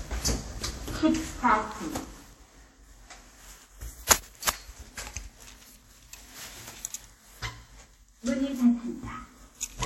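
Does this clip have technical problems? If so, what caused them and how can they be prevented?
Yes. WMA compression artefacts run through the whole clip: the sound rings and washes, with a hiss that breathes along with it. This is likely a transform codec whose long blocks smear quantisation noise over tens of milliseconds, consistent with a bitrate of around 48 kbps. Prevent it by encoding at a higher bitrate or saving to a lossless format.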